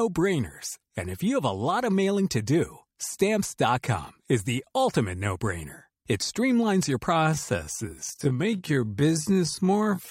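At 7.11 s, right after "streamlines your", the speech abruptly drags to a little over half its pace, about 0.57 times normal speed, and stays that way to the end while the pitch holds steady. This is a time-stretched section: software likely lengthened that portion to fit a length, preserving pitch by repeating short slices of the sound.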